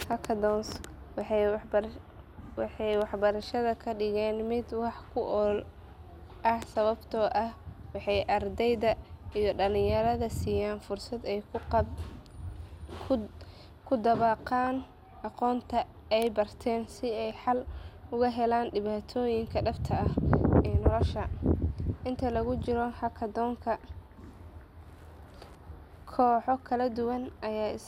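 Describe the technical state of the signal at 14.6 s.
From 14.62 to 14.84 s, bit errors from weak DAB reception corrupt MP2 audio data, giving DAB burbling: short noise blips in single sub-bands over the speech.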